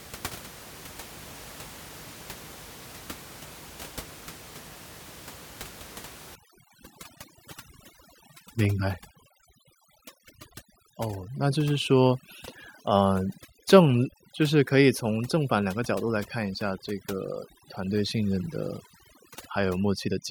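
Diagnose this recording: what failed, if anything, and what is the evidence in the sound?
Overdone noise removal in the call processing stage, from 6.35 s to the end at 20.3 s. The room noise, about 19 dB below the speech, drops and breaks up into twinkling specks. The suppressor is cutting bands near its noise estimate too hard, and quiet speech detail goes with them.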